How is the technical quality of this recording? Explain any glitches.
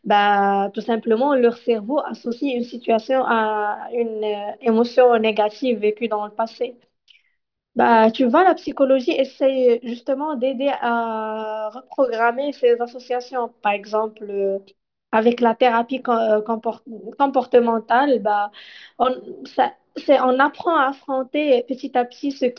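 The recording has one fault, aliasing, present throughout. The speech was resampled to a lower rate, consistent with a drop to about 11 kHz, without an anti-alias filter. Content above 5.5 kHz folds back as gritty, metallic sibilance, about 30 dB below the speech.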